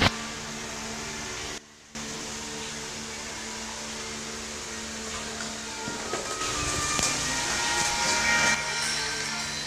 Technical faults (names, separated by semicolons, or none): sudden gain jump